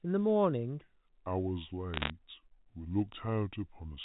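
A telephone-band speech recording. From 0.81 s to the end, it is a section at the wrong speed. It plays at 0.725 times its proper rate. Pitch drops about five semitones, and the speech turns deep and dragging. The likely cause is playback against the wrong clock. From 1.94 to 2.10 s there is a burst of bit errors on a digital phone line. Flipped bits corrupt single samples, with under one percent of bits hit. A hit on a high bit gives a sharp tick, and together they make a short crackle over the slowed speech. The G.711 A-law coding that carries it all limits the sound to below 4 kHz.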